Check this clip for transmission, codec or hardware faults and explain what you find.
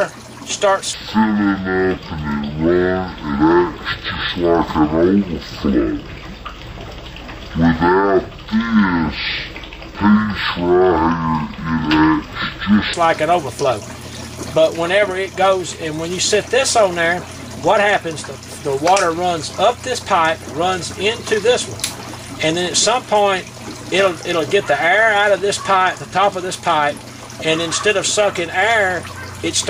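One fault appears. From 0.94 to 12.94 s, stereo was read as mono: interleaved left and right samples played as one channel, so the sound runs at half speed, an octave low.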